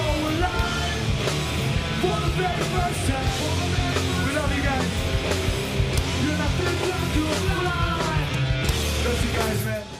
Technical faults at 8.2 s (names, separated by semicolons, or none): none